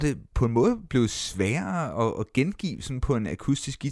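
Nothing stood out on listening to this speech recording.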